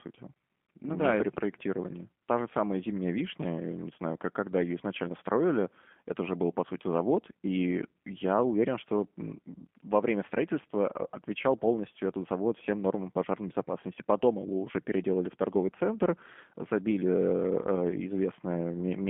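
G.729 codec damage runs throughout: speech squeezed into a 200 Hz to 3.4 kHz band and rebuilt from a few pulses, sounding rough and synthetic, consistent with 8 kbit/s G.729A.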